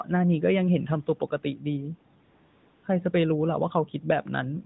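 Between 1.07 and 1.65 s the noise suppressor cuts into the speech, treating parts of it as background and pulling them down by up to about 11 dB. Roughly 150 ms in all is affected, so soft consonants and trailing sounds come out swallowed and faint.

From 2.24 to 2.84 s, AMR comfort noise replaces the real background. The phone decided the talker was silent and stopped sending speech frames for 0.6 s, and the receiver filled the gap with smooth synthetic noise that switches in and then out again.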